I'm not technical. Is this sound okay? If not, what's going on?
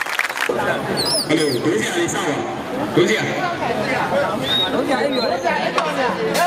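Yes, it's fine; nothing here sounds wrong.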